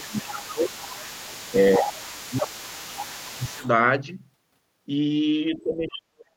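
Right from the start, from 0.0 to about 3.7 s, there's the other side's voice leaking through underneath, sitting roughly 20 dB below the main talker. It's likely a loudspeaker echo the canceller didn't fully strip out of the mic. On top of that you get speech suppressed in double talk: the talker ducks by around 15 dB from 0.07 to 0.76 s, dips about 10 dB around 1.79 to 2.0 s, then drops about 20 dB from 2.3 to 3.64 s. Near the end, 5.55 to 6.33 s, it all but vanishes, down some 40 dB. That's likely the canceller clamping down on both voices at once.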